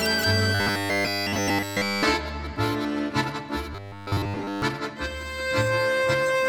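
From 0.55 to 2.03 s, the sound collapses into robotic sound from repeated short buffers, a rigid metallic buzz at 100 Hz. The likely cause is one 10 ms buffer looped while new audio was late, replacing nearly everything. It returns from 3.73 to 4.62 s, covering most of the sound.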